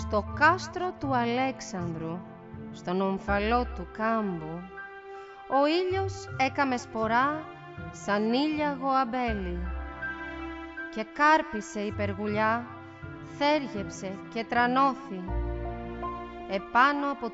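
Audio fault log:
No technical faults can be heard in the clip; the signal stays continuous and steady throughout.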